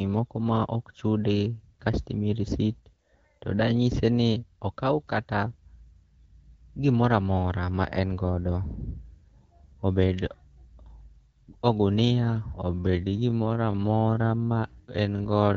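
At 12.53 s the pace suddenly drops, and it stays slow until the clip ends at 15.56 s. The speech runs at about 0.62 times its earlier speed, yet the pitch does not fall. This is a time-stretched section. The likely cause is software lengthening the audio by repeating short pieces to keep the pitch. The light HD Voice coloring, consistent with AMR-WB near 12.65 kbit/s, carries through the stretch.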